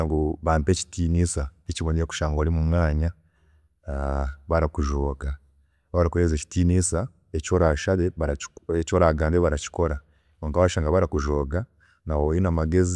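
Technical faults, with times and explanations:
Nothing to flag here; there are no technical faults anywhere in this speech recording.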